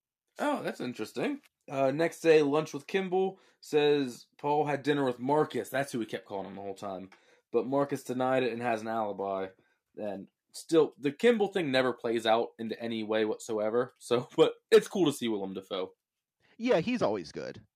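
No faults found in this speech recording; nothing in the signal chain calls for attention.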